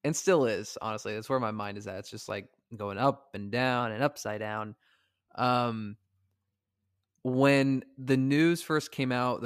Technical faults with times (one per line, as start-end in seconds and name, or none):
3.80-4.92 drift correction step